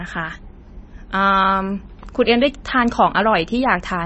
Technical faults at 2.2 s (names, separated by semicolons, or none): MP3 compression